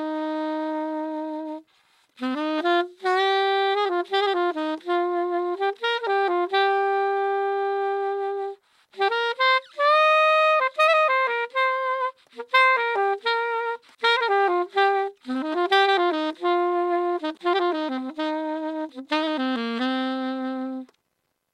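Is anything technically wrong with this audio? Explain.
No, no technical faults detected.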